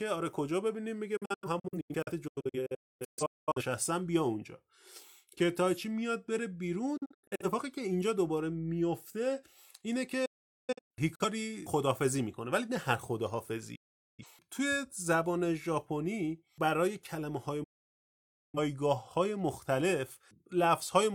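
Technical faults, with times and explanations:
1.17–3.62 s, 6.97–7.45 s, 10.25–11.25 s, 13.75–14.26 s and 17.64–18.58 s, digital broadcast dropout: the speech snaps to silence through a quick 8 ms fade, sometimes in several short holes. In the first stretch 1.24 s goes missing across 2.39 s, with no gap over 256 ms, while the longest gap in the stretch at 10.25 s runs 427 ms. The receiver muted whenever frames were lost or failed their checksum, in steps that fit frames of about 43 ms, and whatever was sent meanwhile never returns.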